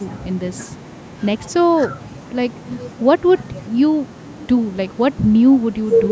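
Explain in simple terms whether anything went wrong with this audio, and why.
Nothing went wrong here; it's ordinary call-microphone audio.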